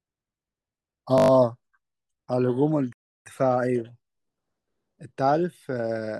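At 1.18 s the speech locks into a system hang loop until 1.3 s. The machine stalled while the sound hardware kept replaying the same 20 ms stretch of its ring buffer, six times over. That gives a steady buzz at 50 Hz. A waveform shows six identical repeating cycles, and a spectrogram shows harmonic stripes 50 Hz apart.

From 2.93 s to 3.26 s a rebuffering stall drops the sound to silence while the player waits for more data. The speech then resumes exactly where it stopped, adding 331 ms. The waveform shows a flat gap and the spectrogram a blank vertical band.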